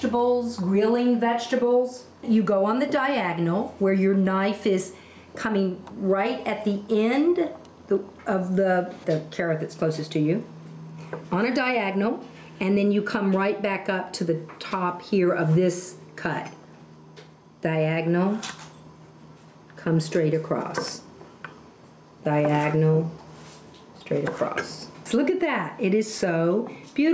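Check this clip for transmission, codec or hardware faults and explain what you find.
One fault runs through the whole clip: gain pumping. The gain swings by about 5 dB. The likely cause is gain set too high, with a fast limiter pulling it down on peaks. Loud and soft passages sit close together, so the audio sounds squashed. The call microphone processing is audible too: the lowest bass is trimmed and nothing reaches above 8 kHz.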